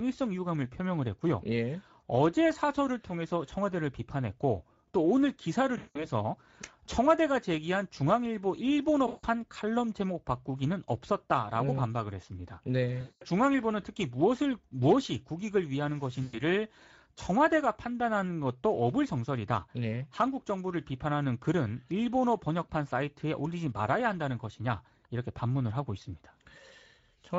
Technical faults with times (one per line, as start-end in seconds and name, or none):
0.00-27.38 Speex codec
5.77-6.08 VoIP packet loss concealed by the speech codec
9.07-9.26 VoIP packet loss concealed by the speech codec
13.01-13.23 VoIP packet loss concealed by the speech codec
16.23-16.40 VoIP packet loss concealed by the speech codec